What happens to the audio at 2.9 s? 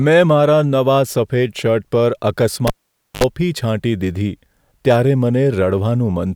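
At 2.9 s the cable is pulled and plugged in again, from 2.67 to 3.24 s. A pop cuts the sound to near silence for about 0.51 s. Then 67 ms of 50 Hz mains buzz arrives as only the tip touches. A second pop restores the sound.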